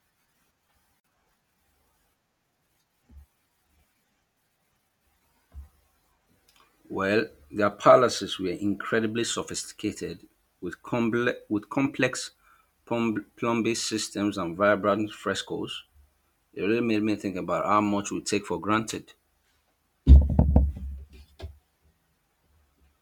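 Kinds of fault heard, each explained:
Gap at a join of encoded pieces: from 1.00 to 1.04 s the speech drops into a gap of about 45 ms, with its edges smeared by the codec so the silent part is shorter, and then resumes exactly where it broke off. The clip was built from separately encoded segments joined without trimming, so the encoder's start-up delay and the padding of the previous segment's final frame both remain in the audio as dead air.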